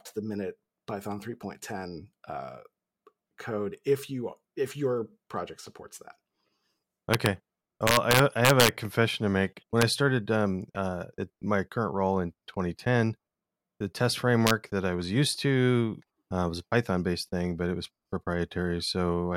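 A speech clip with integer overflow on its loudest moments. Violent cracks hit at 7.14 to 7.26 s, 7.87 to 8.69 s before "confession to make", 9.82 s before "I started um uh", and 14.47 to 14.51 s between "the test" and "that I was used". The level runs only about 1 dB past the integer limit. Each peak wraps to the opposite sign instead of being held, so the crack is far harsher than clipping.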